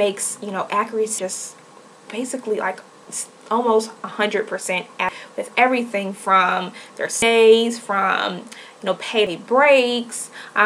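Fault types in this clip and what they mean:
Damaged data in a compressed stream: five brief chirps or blips, about two seconds apart, where corrupted frames throw the decoder out of sync until it finds the next header.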